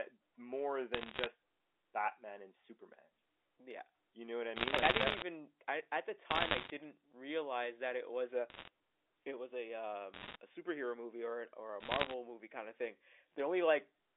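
Telephone speech carries bursts of bit errors on a digital phone line at 0.94–1.26, 4.56–5.22, 6.31–6.70, 8.50–8.68, 10.14–10.36 and 11.80–12.14 s. Single flipped A-law samples give sharp ticks and crackle at roughly one or two errors per hundred bits. Unlike packet loss, the speech never gaps.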